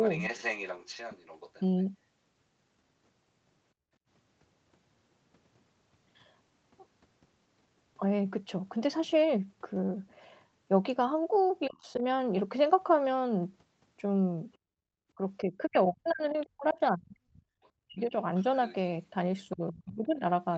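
A speech recording where, from 0.02 to 1.84 s and again from 14.53 s to the end, a second voice sits about 10 dB and then roughly 20 dB under the talker, most likely the other side's voice leaking through from the loudspeaker past the echo canceller. At 3.74 to 4.0 s and 14.58 to 14.87 s the room background ducks by up to about 21 dB and comes back, background gated by the echo canceller as it clamps the microphone. The talker's own voice dips by roughly 25 dB at 11.67 to 12.02 s, then cuts out in pieces totalling around 2 s between 15.15 and 20.25 s, falling as far as about 40 dB. This is likely speech suppressed in double talk, with both sides speaking and the canceller pulling everything down. The call path passes nothing above 8 kHz.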